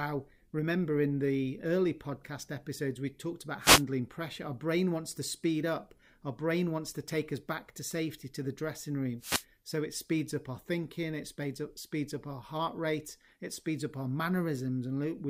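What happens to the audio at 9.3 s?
A wireless microphone noise hit runs from 9.19 to 9.45 s: the FM radio link fades, and receiver noise swells into a brief swish of static over the speech.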